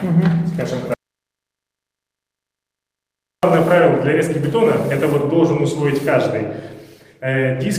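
An audio dropout to silence runs from 0.94 s to 3.43 s, cutting roughly 2.5 seconds out of the clip. The sound stops abruptly mid-flow and resumes just as suddenly, with true silence in between and no room tone or background carrying through. The input signal was likely lost for that stretch, through a disconnected device, a broken link or an unintended mute, while recording continued and filled the gap with silence. Whatever sounded during that interval is gone.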